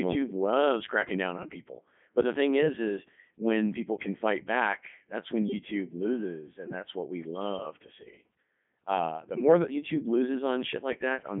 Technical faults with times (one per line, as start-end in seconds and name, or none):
0.00-11.40 Codec 2 vocoder